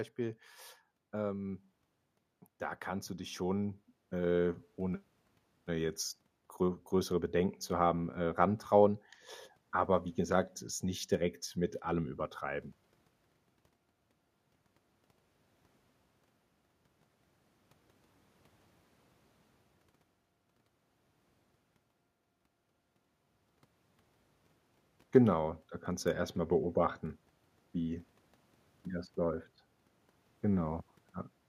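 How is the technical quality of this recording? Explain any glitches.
The recording has one glitch. From 3.07 to 7.43 s, after "da kannst", the automatic gain is rising. The control hears quiet input and lifts level about 7 dB. Voice and background swell together until "zu haben äh rantrauen".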